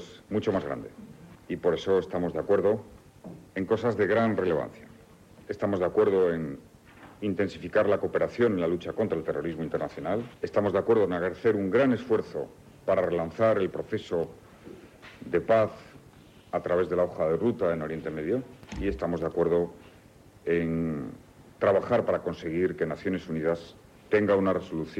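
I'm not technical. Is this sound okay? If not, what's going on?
Yes, nothing wrong can be heard anywhere in this recording.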